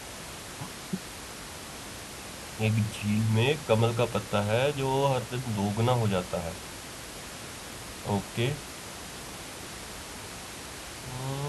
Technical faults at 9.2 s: none

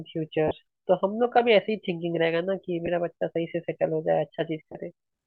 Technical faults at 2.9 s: lost LE Audio frames

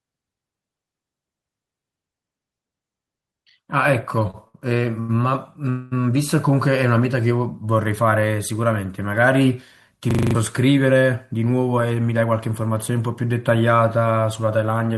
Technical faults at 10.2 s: system hang loop

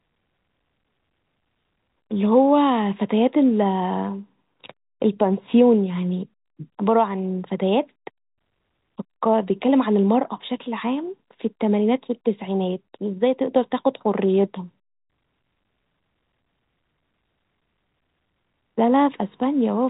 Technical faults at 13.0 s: none

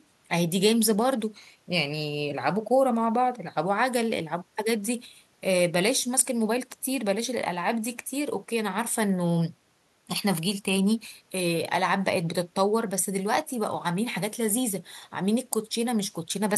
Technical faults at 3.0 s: none

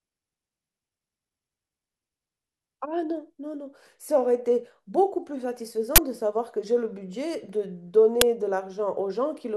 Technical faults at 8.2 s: uninitialised buffer

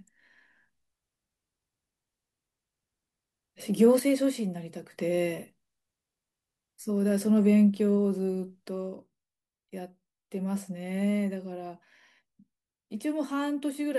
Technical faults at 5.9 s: none

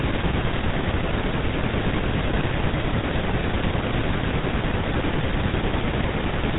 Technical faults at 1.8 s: GSM full-rate codec

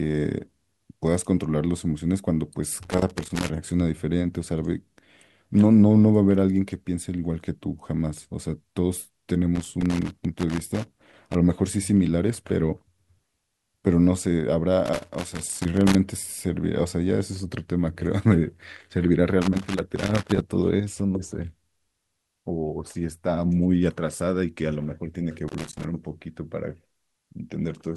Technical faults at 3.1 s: loose connector crackle

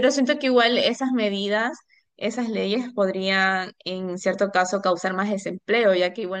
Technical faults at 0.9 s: none

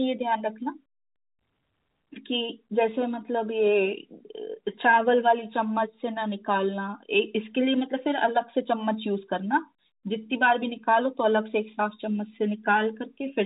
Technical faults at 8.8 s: none

